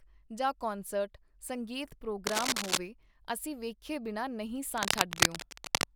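From 2.27 to 2.78 s, and again from 4.74 to 5.85 s right after "ਬਿਨਾਂ ਨਹੀਂ", there's cable scratch noise: dense, ragged rustling sitting noticeably above the speech. It's likely a worn cable or connector being moved, its contact jittering.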